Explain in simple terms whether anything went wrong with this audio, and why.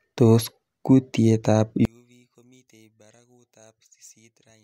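Something goes wrong at about 1.85 seconds. From there to the end, the speech nearly disappears. What remains is a faint trace of the sound. This fits one channel inverted, which is the likely cause. A stereo recording has a left and a right side. If one side is flipped upside down, the two sides cancel each other when played together through one speaker. Anything centred, like this speech, is almost wiped out.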